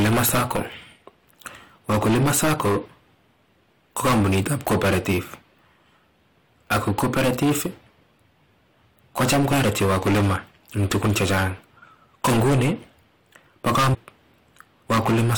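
Hard clipping runs through the whole speech clip. It's driven about 22 dB past full scale, so roughly one sample in seven gets flattened, giving a harsh fuzz on everything loud. Damaged data in the compressed stream shows up as a quick glitch at 9.51 s and again from 13.93 to 13.95 s, where the decoder loses frame sync.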